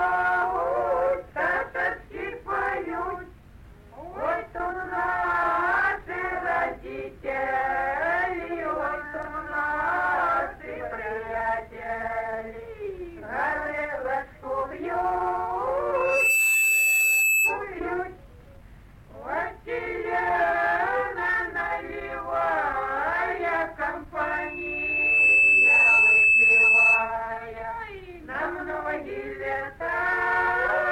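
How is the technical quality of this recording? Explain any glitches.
Two bursts of loudspeaker feedback squeal, at 15.95–17.60 s and 24.21–27.16 s. Both are a 2.6 kHz tone where the mic-speaker loop ran away. The first swells within half a second; the second builds over about a second to roughly 10 dB above the audio.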